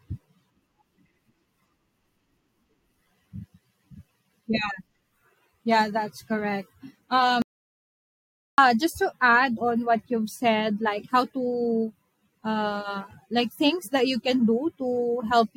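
At 7.42 s the speech cuts off mid-flow into dead silence, with no room tone at all, and resumes abruptly at 8.58 s, about 1.12 s missing. This audio dropout to silence likely came from the input link failing while the recorder kept writing silence.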